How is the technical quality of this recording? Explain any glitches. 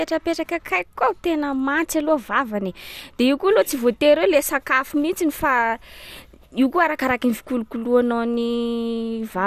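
The recording carries plainly audible MP2 compression damage from start to finish. Nothing is present above 15.1 kHz, and the speech sounds dull, with a gurgling, granular texture. The likely cause is MPEG Layer II coding at a low bitrate, around 80 kbps by the sound of it. The encoder divides the signal into 32 sub-bands and, short of bits, drops the upper ones entirely while quantising the rest coarsely. Bands switching in and out produce that grainy flutter.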